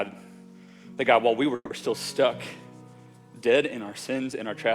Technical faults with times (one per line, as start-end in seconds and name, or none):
1.55-1.73 call audio freeze